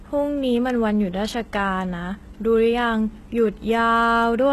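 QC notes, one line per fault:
Throughout: heavy HE-AAC compression, likely at about 16 kbps. Copied lower bands rebuild the treble, so s sounds turn gritty and lispy. Nothing above 12.3 kHz.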